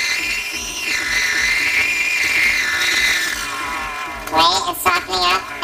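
Planar audio read as interleaved runs throughout: each block of left samples followed by right samples is taken as alternating pairs. The blocks last about 5.8 ms, which fits 256-sample blocks, so the sound carries a robotic buzz at 172 Hz with no clear octave shift.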